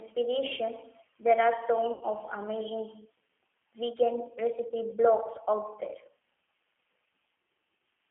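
The whole clip runs through the G.729 codec. The speech sits in a narrow band of about 300 Hz to 3.4 kHz, consistent with 8 kbit/s. The codec rebuilds each frame from a filter and a few pulses, so the voice sounds plainly rough and synthetic throughout.

At 1.93 s, just after "there are", VoIP packet loss is concealed by the speech codec. About 80 ms of audio is missing, which fits eight lost 10 ms frames. The decoder stretches the last sound into a fading buzzy tone or coloured noise, and the speech stays weak for tens of milliseconds after the packets return at about 2.04 s.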